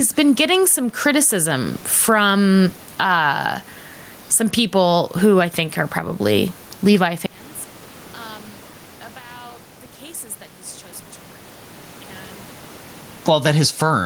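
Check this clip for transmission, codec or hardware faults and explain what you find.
Two faults stand out: level pumping across the whole recording, and a stretch in the second half where the speech nearly disappears.

Gain pumping runs from start to finish. The level breathes in step with the speech, swinging by something like 15 dB. Loud and quiet passages sit unnaturally close together and the speech sounds squashed. The likely cause is an input gain set far too high for the microphone, with a fast limiter or compressor clamping down on every peak and releasing in the gaps. The room noise sits about 37 dB below the speech.

One channel inverted, from 7.26 s to 13.26 s. Across those six seconds the speech collapses by about 32 dB, leaving only a faint residue where the voice had been. The likely cause is reversed polarity on one stereo channel at the point where the two are summed to mono. 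Anything common to both sides, which here is almost the entire centred voice, cancels out, and only the small differences between the channels survive.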